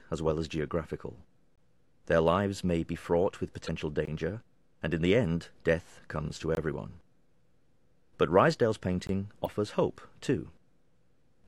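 At 1.56 to 1.58 s there is a gap between chunks. The sound stops for about 21 ms and then resumes. The audio arrived in 2.5 s blocks, and silence was left at each join. Nothing is lost. The flow is simply broken.

At 3.64 to 3.69 s comes damaged data in a compressed stream. A short glitch cuts through. The decoder hit corrupt frames, lost sync and hunted for the next valid header.

The same 21 ms hole returns at 4.05 to 4.07 s, matching the 2.5 s block spacing.

A second corrupt-frame blip follows at 6.25 to 6.31 s. Another chunk gap lands at 6.55 to 6.57 s.

The last gap falls at 9.07 to 9.09 s. A final glitch from damaged data sounds at 9.42 to 9.47 s.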